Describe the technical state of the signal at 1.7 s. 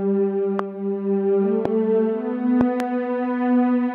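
A sudden voltage step or pulse, most likely from a plug, switch, static discharge or driver glitch, has been added to the signal between 1.65 and 1.68 s. That single pulse, shaped by the downstream circuitry, produces a loud pop: one sharp, brief thump standing roughly 15 dB above the surrounding sound, lasting only a couple of hundredths of a second, with the underlying audio continuing uninterrupted beneath it.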